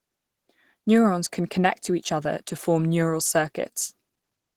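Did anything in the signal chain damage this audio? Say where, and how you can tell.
Yes. Throughout the speech the sound is muffled and hoarse, with a grainy, rough texture on sustained sounds rather than the swirling holes of MP3. The top end still reaches fullband, but the detail above the core range sounds synthesized rather than real. This is damage at the codec stage, likely Opus compression in its hybrid mode, pushed hard enough that the artefacts are plainly audible, which fits a low bitrate of around 16 kbps.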